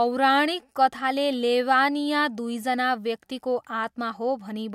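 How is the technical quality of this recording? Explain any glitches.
No glitches turn up here; the speech runs along without a single dropout, click or stutter to point at.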